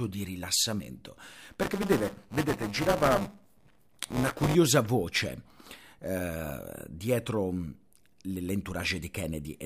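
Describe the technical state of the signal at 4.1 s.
At 4.1 s the speech is inside a stretch of buffer tearing from 1.23 to 4.55 s, starting just after "di rilassamento". Writer and hardware reader overlap each 5 ms period, splicing in a small slice of audio roughly 15 ms stale. This produces a 200 Hz robotic buzz, seen as regular waveform discontinuities and evenly spaced spectrogram harmonics.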